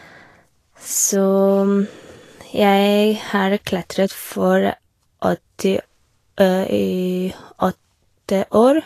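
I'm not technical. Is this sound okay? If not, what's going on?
No. Throughout the speech, the sound is hissy and grainy, with a rough, sandy edge on the brighter sounds and smeared starts to sounds. Nothing above about 14.2 kHz is left, so the top sparkle is missing. This is likely Vorbis compression at a low quality setting: to save space, the encoder cuts off the highest frequencies and stores the remaining treble so coarsely that fine detail turns into a noise-like fizz.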